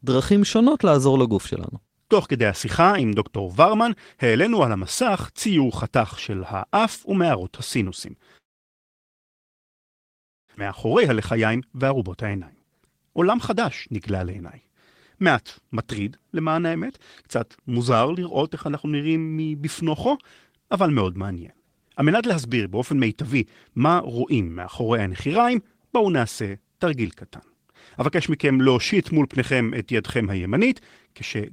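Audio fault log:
8.37–10.50 s, call audio freeze: the sound stops, held as a brief tail and then about 2.1 s of silence. This likely comes from delayed packets draining the jitter buffer, and nothing is lost.
10.56–10.58 s, skip ahead: playback jumps abruptly forward, dropping roughly a second and a half of audio. Audio was dropped in transit or by the overflowing buffer while later audio was already waiting after the stall.
10.66–14.39 s, jitter buffer speed-up: the speech sounds hurried, running at 114% with unchanged pitch. Tiny pitch-period slices totalling about half a second are removed to shrink the buffer's excess delay.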